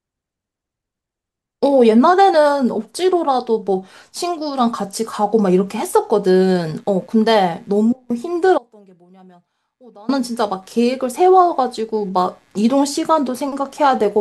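From 6.57 s to the end of the speech, a computer activity noise rides underneath: a buzzy, chirping texture pulsing at roughly 100 Hz and sitting very low, around 45 dB below the speech. It comes from processor, graphics or mouse load shifting the ground shared with the audio circuit. Unlike steady mains hum, its character tracks the machine's workload, flickering and changing texture independently of the speech.

At 8.58 s the speech drops abruptly to a faint residue for about 1.5 s, returning at 10.09 s. During the gap only a thin trace of the signal remains, roughly 25 dB down. The likely cause is a break in the signal feed while the later stages stayed live. It is not a natural pause or a fade because the cut and return are instantaneous and the residue never falls to true silence.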